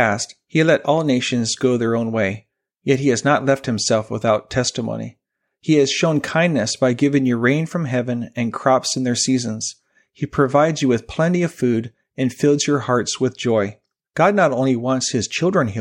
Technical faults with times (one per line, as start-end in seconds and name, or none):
none